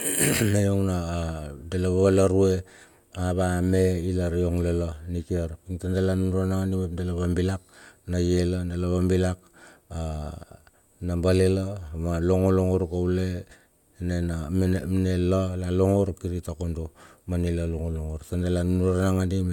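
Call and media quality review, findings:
No audible faults in the speech recording; nothing to raise against capture, transport or playback.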